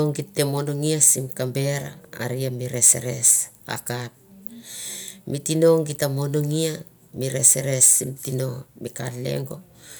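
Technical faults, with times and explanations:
No technical faults detected.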